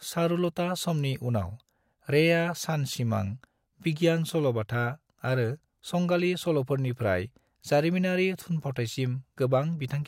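No technical faults are audible anywhere in the recording.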